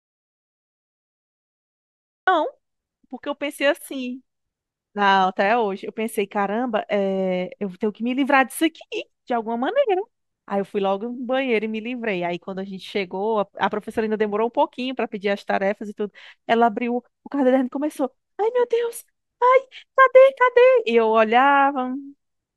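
The input signal was most likely lost, with the recorder writing silence, at the start of this speech clip, producing an audio dropout to silence from 0 to 2.28 s: dead silence without room tone, with speech then cutting in abruptly mid-flow.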